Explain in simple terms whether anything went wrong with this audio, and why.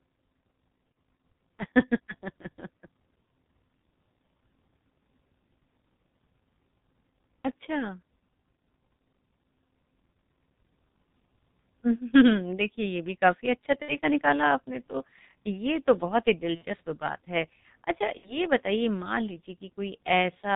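The whole recording passes through the G.723.1 codec, an old low-rate phone codec that cuts the high frequencies, so the speech sounds muffled and hoarse with smeared consonants.

VoIP packet loss concealed by the speech codec occurs at 0.92–0.95, 13.82–13.99, 16.55–16.65 and 18.17–18.38 s: missing audio is guessed by the decoder, producing brief buzzy or noisy, fading, distorted patches.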